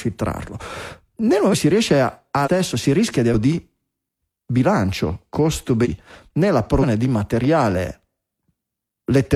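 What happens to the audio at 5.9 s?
Right around 5.81 to 5.87 s, compressed frames get skipped: roughly half a second of speech, about ten frames of around 46 ms each, simply vanishes, so the speech jumps ahead at the join.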